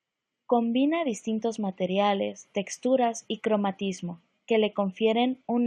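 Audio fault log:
No fault is heard in this speech clip.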